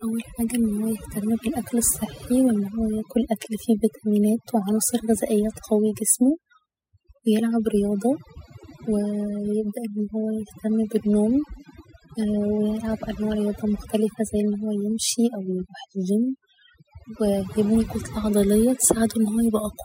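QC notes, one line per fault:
Throughout: overdone noise removal. Aggressive noise reduction gates bands near the noise floor, leaving speckled near-silence between phrases and holes on a spectrogram.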